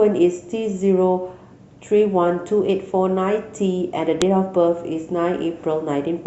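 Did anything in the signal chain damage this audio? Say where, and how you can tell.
Yes. The damage happened at storage or playback, where separate WAV pieces were joined or streamed without stripping their headers, so a file header was played as audio. At 4.22 s the speech is interrupted by a single sharp, loud click lasting about a millisecond, unrelated to the surrounding sound. That is the header's few dozen bytes of metadata being read as sample values, which marks the boundary where a second piece begins.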